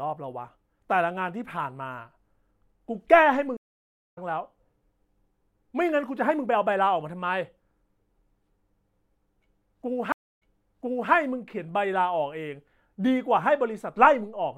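At 3.57 s the speech drops out in a stream reconnect: the connection broke, the player sat silent for about 572 ms, then reconnected and started a fresh decoder, resuming by 4.18 s roughly half a second further on, so a chunk is simply skipped. At 10.12 s it happens again, with a shorter 263 ms gap, but this time playback comes back 731 ms earlier, so you hear a bit repeated before it settles by 11.12 s.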